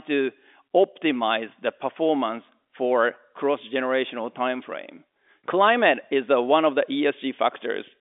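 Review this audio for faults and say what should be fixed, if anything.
Nothing here needs fixing; the speech simply has the narrow telephone-line sound of G.711 coding, with the band running from about 250 Hz up to 3.6 kHz.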